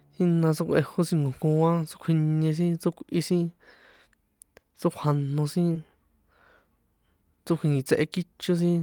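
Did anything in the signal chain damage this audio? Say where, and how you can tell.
Yes. At the network stage there is a short concealed packet loss from 5.73 to 5.77 s in this speech. About 20 ms of audio arrived too late, and the receiver spent roughly 13 ms extending the preceding sound before blending back. The result is a brief smear rather than silence. A dropout or buffer underrun would leave a hard gap or click, while concealment papers over the hole with a plausible continuation.

Overlapping that, from 5.75 to 5.77 s, one 20 ms packet was a lost packet rebuilt from error correction. The following packet carried a low-bitrate redundant copy, which the decoder played in place of the missing frame. That portion sounds rougher and noisier but keeps its continuity. That distinguishes it from pure concealment, which guesses the content and tends to wobble, and from codec starvation, which would degrade a longer stretch instead of a single frame.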